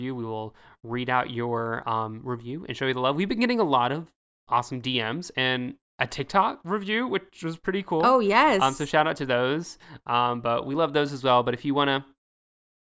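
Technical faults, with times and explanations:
Nothing stood out on listening to this speech recording.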